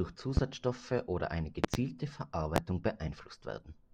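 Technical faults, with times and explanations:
0.37–0.40 s, 1.64–1.77 s and 2.56–2.60 s: loud pops, single sharp clicks standing roughly 20 to 25 dB above the speech, with a double pop after "oder eine". The speech continues underneath. These are likely sudden voltage steps from a switch, plug or static discharge.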